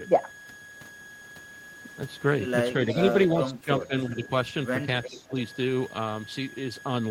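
Running through this entire speech recording is a thin, steady whistle that wavers slightly between about 1.65 and 1.67 kHz, sitting roughly 20 dB below the speech. This is a switching supply whistle, from a switching power supply oscillating at an audible rate that shifts slightly with load. From 2.92 to 3.12 s and again from 5.04 to 5.22 s, a faint, scrappy copy of the speech follows 362 ms behind, some 10 to 15 dB down. This echo leak is likely a far-end echo canceller letting residual loudspeaker pickup through. Overlapping those moments, the main speech dips by around 10 dB at 2.94 to 3.1 s and 5.08 to 5.36 s. Between 3.4 and 4.3 s it sinks by as much as 20 dB for about half a second in total. This is speech suppressed in double talk, likely the canceller attenuating everything while both sides speak at once.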